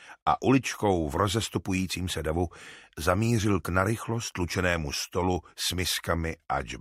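No technical faults occur at any point in the audio, so there is nothing to describe in time order.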